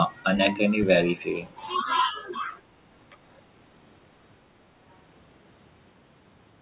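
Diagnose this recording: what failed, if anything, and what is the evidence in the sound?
The speech level sags twice, pointing to the call-processing stage. From 1.81 to 2.56 s it drops by roughly 5 dB over most of that span, and from 3.1 to 3.16 s it dips harder, by about 10 dB. The likely cause is speech suppressed in double talk: with both ends talking, the echo canceller could not separate the near talker from loudspeaker echo and attenuated both. The band stops at 4 kHz, which fits a G.711 call path.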